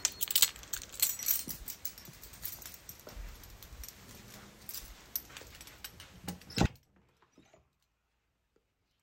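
From 6.66 s to the end, an audio dropout abruptly leaves a faint residue about 30 dB down. Unlike a fade, the signal was likely lost instantly.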